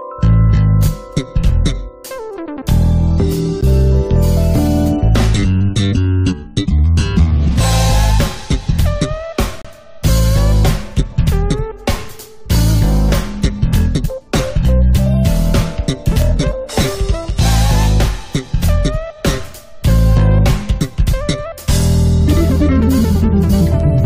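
From 1.02 s to 23.80 s, word clock ticks recur about once a second, roughly twenty in all. The receiving device runs on its own clock, about 20 parts per million off the sender's, so each slip drops or repeats one sample. Each tick shows as a thin vertical line on a spectrogram and a short spike on the waveform.

At 3.61 s, and again from 9.62 to 9.65 s, there is a gap between stream segments. The time stamps of consecutive segments, which fit a 6-second segment length, leave holes of 13.8 ms and 30.1 ms that are filled with silence. Each appears as a blank vertical strip on a spectrogram and a flat line with hard edges on the waveform.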